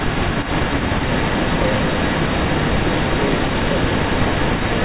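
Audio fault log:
Throughout, echo leak: a far-end echo canceller, likely running beside a loudspeaker, failed to remove what its microphone picked up and returned it down the line. The result is a second copy of the speech trailing the original by about 344 ms, at roughly the same loudness. Both copies share the narrow telephone band, with nothing above 4 kHz.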